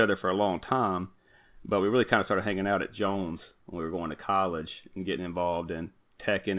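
No technical faults can be heard in this speech.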